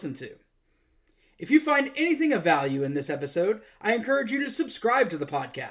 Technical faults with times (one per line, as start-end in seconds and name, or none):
none